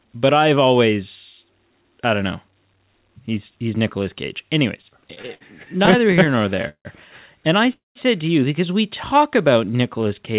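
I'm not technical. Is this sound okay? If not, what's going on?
No. From 4.82 to 6.87 s there are repeated stalls, a stutter. The speech keeps pausing briefly, about two dozen times, while the phone stretches the last sound to cover the waits.

At 7.73 s there's a call audio freeze lasting about a quarter second, right before "to you because we". The sound buzzes briefly, then goes silent. Delayed data on the network is the likely cause.

From 9.14 s to the end, after "to you because we", a jitter buffer slow-down drags the speech to about 91% speed. It sounds drawn out, but the pitch stays the same.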